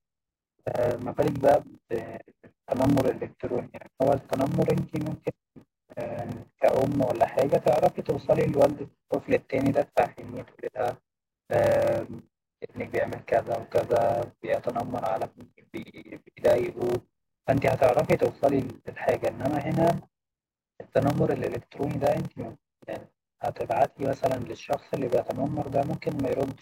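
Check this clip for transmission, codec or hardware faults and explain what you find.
Two faults are present in this speech clip: a padded block size mismatch running the whole way through, and compressed frames skipped at two points.

Block size mismatch (padded), throughout: one stage hands over blocks shorter than the next stage expects, and the shortfall in each block is filled with silence. The sound fits 1024-sample blocks being read into slots about 1152 samples long. Each inserted gap repeats at 38.3 Hz, giving a steady low buzz under the speech, and the added silence stretches the timing to 0.889 times normal speed while pitch stays about natural. That unchanged pitch, with a buzz at a fixed rate, distinguishes it from a resampling or clock error, which would shift pitch along with speed.

Compressed frames skipped, at 10.38 s and 15.21 s: whole frames of the coded stream never reach playback, so the speech jumps forward by whole frames of 46.4 ms. 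At 10.38 s roughly three frames, about 150 ms of speech, are lost. At 15.21 s about one frame, around 50 ms, goes missing. Speech is missing rather than silenced. A plain dropout would leave a gap instead.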